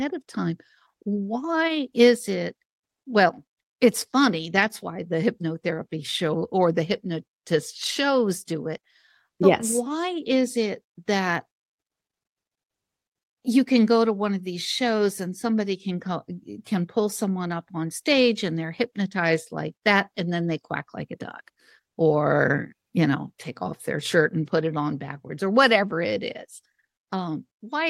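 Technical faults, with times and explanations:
No technical faults detected.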